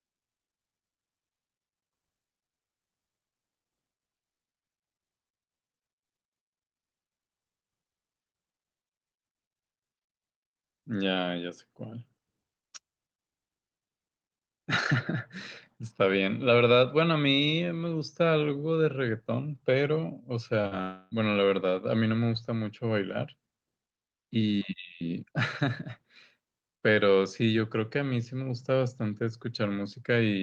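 At 20.61 to 20.65 s and again at 20.67 to 20.73 s, short concealed packet loss leaves two quick smears, about 20 ms and 40 ms of audio patched by extending the preceding sound. Because each gap is brief and the fill blends back in, they pass as a brief smear or wobble rather than breaks. From 20.81 to 21.13 s comes a long network dropout, likely a lengthy stall in arriving packets. Its 300 ms fill is a drawn-out buzz or hiss that never falls to silence, and the sound resumes with that stretch missing.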